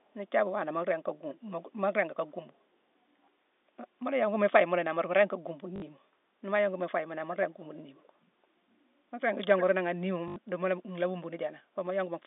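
At 1.34 to 1.5 s and again at 1.66 to 1.72 s, a faint delayed copy of the speech trails the original by about 364 ms, roughly 25 and then 30 dB down. It returns at 7.98 to 8.08 s, very faint at roughly 35 dB down, and at 9.57 to 9.64 s, where it is much stronger at only about 10 dB below the speech. In these last two the delay is about 345 ms. This is likely an echo leak, where a loudspeaker at the far end fed its microphone and the echo canceller let some through. It differs from room reverberation because it is a distinct, separated repeat arriving a third of a second late, not a smooth decaying tail.

At 5.76 to 5.82 s, a 60 ms stretch becomes a brief robotic buzz. The same happens at 10.28 to 10.36 s over 80 ms. This is packet loss with the last packet repeated, and the lengths fit three and four lost 20 ms packets. The receiver played the previous packet over again, which produces a buzz at roughly 50 Hz. 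A plain dropout would leave silence, but here there is a stutter. Both faults sit within the narrow 250 Hz to 3.7 kHz band of G.711 telephone coding.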